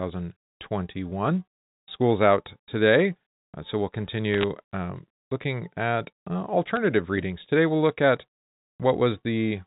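Bit errors on a digital phone line flip individual bits in the mu-law samples, first from 4.34 to 4.44 s at a heavier rate, then lightly from 6.66 to 6.77 s, each burst corrupting scattered samples over the narrowband telephone sound.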